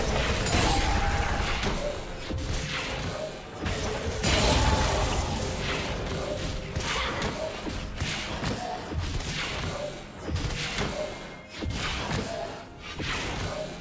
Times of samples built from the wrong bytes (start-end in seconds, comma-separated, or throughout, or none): none